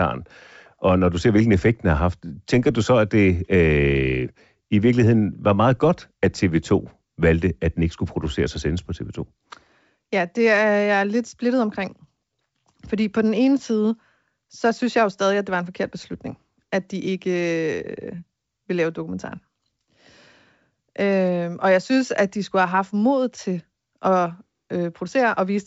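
No technical faults can be heard in this speech.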